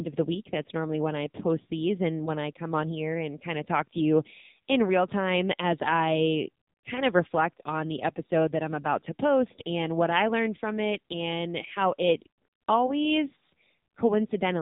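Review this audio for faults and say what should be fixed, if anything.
AMR narrowband mobile codec damage is present throughout the speech. Nothing passes above 3.8 kHz, and the voice turns buzzy and synthetic because each frame is rebuilt from a vocal-tract model driven by sparse pulses. The heavy damage points to a low mode around 6.7 kbps. To prevent it, capture the source before the mobile link or use a wideband codec, or at least a higher AMR bitrate mode.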